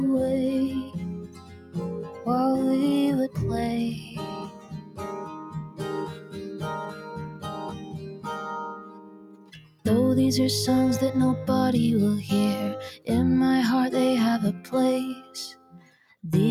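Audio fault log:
Throughout: noise suppressor applied to music or sounds. A speech-tuned noise suppressor is left running on the material, so it treats steady tones, ambience and decays as something to get rid of. The gain it applies keeps shifting by roughly 15 dB as it decides what counts as noise, so onsets come through while anything held gets pushed down. The result is a pumping, fluttery level and a thinner sound overall.
0.85–1.76 s, 4.0–8.27 s, 8.71–9.85 s, 15.16–16.23 s: sound cut by the noise suppressor. In these stretches the suppressor clamps down harder than elsewhere. It pulls the sustained parts down by about 11 dB, and by about 10 dB in the last one. Roughly three seconds of the long 4–8 s stretch sinks, and most of each shorter one does. Tails get cut short while sudden hits still poke through, which leaves that hollow, ducked feel.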